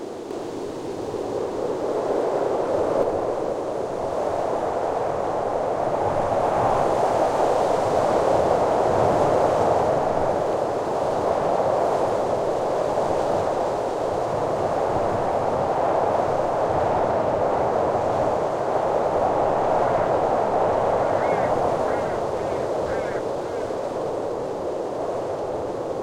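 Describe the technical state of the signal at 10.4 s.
At 10.4 s the signal is intact, with no audible fault at that moment.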